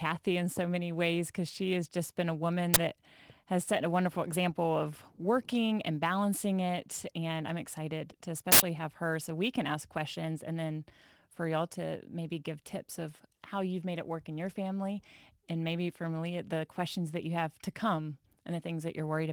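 Speech runs with a hiss that rises on loud and bright syllables and vanishes in pauses: sample clock jitter of a few microseconds, at about 20 dB below the signal, unlike steady noise. Two uninitialised buffer bursts of loud digital noise follow "has just been a" at 2.74 to 2.76 s and "I'm excited to" at 8.52 to 8.60 s, too loud and brief to be dropouts, beneath the light smoothing of Opus voice compression.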